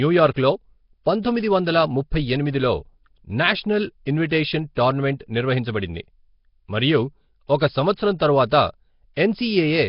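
Throughout the speech, the sound has a rough, hissy halo and a smeared, underwater character, with nothing above 5.3 kHz. This heavy damage is likely Nellymoser compression: a coarse block codec, consistent with a rate of about 22 kbps, that drops weak bands and fills them with noise.

Pre-echo occurs at 0.34 to 0.36 s, 1.22 s, 4.29 to 4.31 s, 4.75 s (both just before "టోర్నమెంట్ నిర్వహించబడింది"), 7.96 s (just after "మరియు ఒక"), and 9.16 s. Each time, the codec spreads noise from a sharp attack back across its block, so a brief hiss of 10 to 23 ms precedes the onset and the attack sounds softened.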